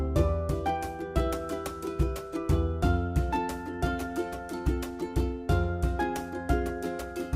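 There are no technical faults in this clip to describe in time order.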